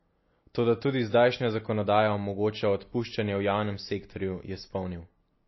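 Speech, with MP3 compression damage running the whole way through: everything above about 5.8 kHz is gone, and there's a plainly audible watery swirl where weak frequency lines flicker on and off between frames, likely from a starved encoder around 24 kbps.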